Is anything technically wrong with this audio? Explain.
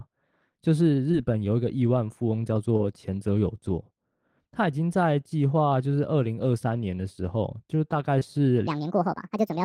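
Yes, there are two kinds of problem in this speech clip.

First, there's short concealed packet loss at 1.11–1.15 s, 2.77–2.81 s and 8.19–8.23 s. Each time, about 20 ms of the stream didn't reach the decoder in time, and the receiver patched the hole by stretching out the preceding sound, pitch-tracked if voiced, shaped noise if not, before easing back into the real signal. You hear a quick smear or wobble, and a small bit of the speech can get swallowed.

Second, from 8.67 s to the end at 9.64 s the audio runs at the wrong speed, 1.57 times faster than it should. Since speed and pitch move together here, the voice jumps up by roughly seven semitones and sounds rushed and chipmunky. The cause is likely that this section was played or resampled against the wrong clock, so it's squeezed into less time than it originally took.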